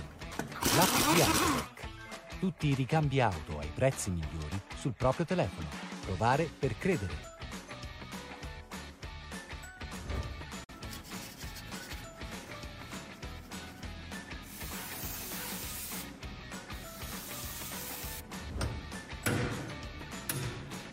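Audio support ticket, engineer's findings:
Digital broadcast dropout, 10.64–10.74 s: receiver muted on a bad frame, consistent with one lost frame; sound fades over 8 ms into a brief silent hole, then resumes.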